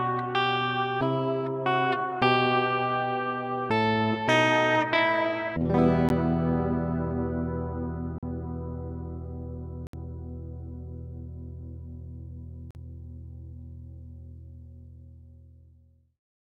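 A click at 6.09 s and short holes at 8.18–8.23 s, 9.87–9.93 s and 12.71–12.75 s are blocks of digital silence: samples dropped to zero without a fade, likely because the output buffer wasn't filled in time. The 43 ms gaps fit a 2048-sample buffer.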